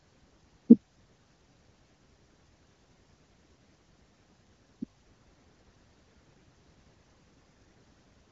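No faults in this speech clip; the band stops near 7.7 kHz, as expected from the AMR wideband (HD Voice) codec working normally at one of its upper rates, likely around 18 kbit/s.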